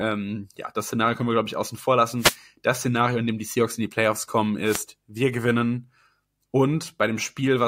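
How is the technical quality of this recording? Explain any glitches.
The speech is marred by two wireless microphone noise hits. At 2.18–2.37 s, right after "glaube ich außen vor", and at 4.64–4.82 s, just before "wir gewinnen", the FM radio link fades as reflections cancel and receiver noise surges into a short static swish. On a spectrogram each shows as a broadband vertical smear, and on the waveform as a brief fuzzy thickening.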